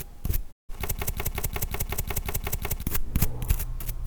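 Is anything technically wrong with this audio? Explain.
Yes. There are two faults.

At 0.51 s the sound has a digital broadcast dropout. It fades out over about 20 ms and stays silent until 0.71 s. The receiver stopped getting usable frames, or the frames failed their checks, so it muted. It came back once good data returned. About 160 ms of audio is gone, which fits roughly five lost frames. It is a clean hole, not noise.

From 0.95 s to 2.83 s there is a broken-record loop. A fragment of about 181 ms repeats exactly, back to back, ten times. It sounds like a stuck, stuttering pulse. The likely cause is a stalled player or stream resending the last chunk it held. Whatever should have played in those two seconds is lost.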